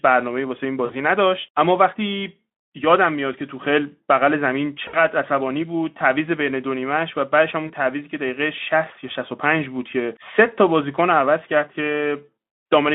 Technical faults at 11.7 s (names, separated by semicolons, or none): none